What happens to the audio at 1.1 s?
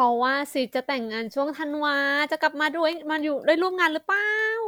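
Nothing goes wrong at 1.1 s; the speech continues intact through that moment with no dropout, click or distortion.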